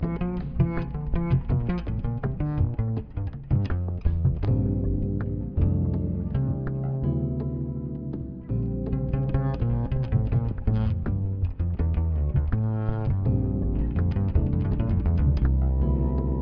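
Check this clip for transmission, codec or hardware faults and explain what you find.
Nothing stood out on listening to the clip.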